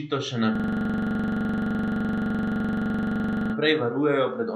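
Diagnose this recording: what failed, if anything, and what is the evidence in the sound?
System hang loop from 0.56 s to 3.54 s, at the driver or buffer stage. A single 42.67 ms fragment repeats about 70 times, a machine-gun stutter at 23.4 Hz, which fits a 2048-sample buffer replayed while the system froze. Speech then resumes with "varujejo pred onesnaženjem pesticidi".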